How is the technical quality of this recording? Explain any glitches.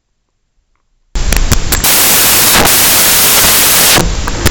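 Poor, because of one serious fault. From 1.16 s to the end, the speech turns into loud, harsh broadband noise. These are samples built from the wrong bytes. The reader assembles each sample misaligned or byte-swapped, so the fast-changing low bits dominate.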